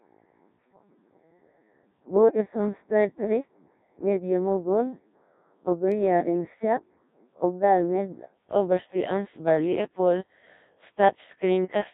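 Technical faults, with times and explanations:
Throughout: Codec 2 vocoder. The speech is robotic and buzzy, confined to roughly 150 Hz to 3.7 kHz. Only pitch, voicing, energy and envelope survive, rebuilt from sine waves, which fits a rate near 1.3 kbit/s. Unlike waveform codecs, nothing of the original waveform or natural breathiness remains.
2.14 to 2.42 s: bit errors on digital voice radio. For about a quarter second the synthetic voice lurches in pitch, loudness and timbre, warbling into bleepy gibberish. Corrupted parameters at an error rate of a few percent derail whole frames. Packet loss would leave gaps; here sound continues but garbled.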